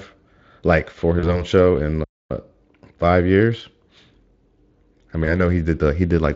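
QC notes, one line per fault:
1.19–1.44 s and 5.25–5.41 s, VoIP packet loss concealed by the speech codec: about 40 ms of audio went missing in the first and 20 ms in the second, which fits two 20 ms frames and then one. The decoder filled each gap by extrapolating its last pitch and filter at falling gain, giving a brief, fading smear. Because each frame builds on the last, the sound stays weak or distorted after data resumes. That lingering recovery is why the damage lasts far longer than the loss itself, over 0.2 s at the first point.
2.03–2.31 s, playback stall: output went silent for 0.26 s, most likely because the player ran short of data or its thread was blocked. The sound stops mid-flow and then resumes once the player recovers. The light Speex coding, which fits roughly 24 kbps, is unaffected here.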